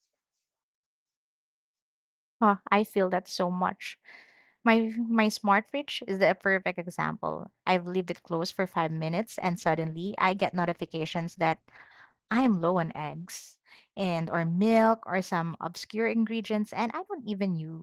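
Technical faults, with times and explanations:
9.30–15.35 s, call bitrate drop: after "it closed for five", the speech turns coarse and rough, which fits the encoder falling from 32 to 14 kbps. It recovers by "obscure ingredients".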